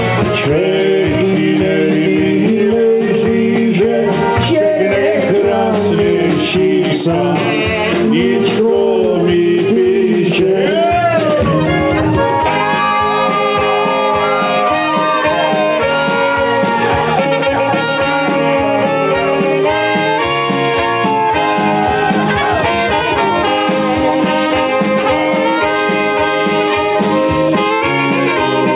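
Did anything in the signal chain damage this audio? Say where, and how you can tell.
No, nothing in the chain damaged this audio. It went over a call path working as intended: the band stops at 4 kHz with the slight grain of narrowband telephone coding, which fits G.711 mu-law at 64 kbps.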